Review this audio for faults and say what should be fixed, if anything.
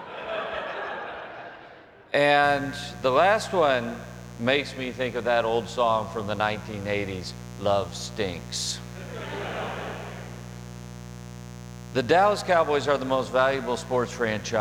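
A steady, raspy buzz comes in at 2.43 s and continues to the end of the clip, sitting under the audio at about 15 dB below it. This is mains buzz. Sharp switching spikes from a dimmer, a rectifier or an unshielded run enter the signal path twice per cycle of the 60 Hz supply. This gives a dense series of harmonics that climbs well into the kilohertz range, which explains the gritty edge beyond a simple low hum. To prevent it, keep dimmers and switching supplies off the recording circuit and use shielded, balanced cabling with sound grounding.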